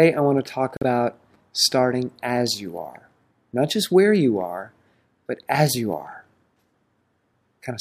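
At 0.77 s the sound drops abruptly into silence for about 60 ms, until 0.83 s. That's a corrupt frame muted: damaged compressed data got rejected by the decoder and the player filled the gap with silence, keeping timing intact. The length fits three 20 ms frames.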